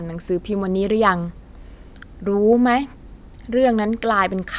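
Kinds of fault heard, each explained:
No technical fault can be heard anywhere in the speech. There is nothing to list for this clip.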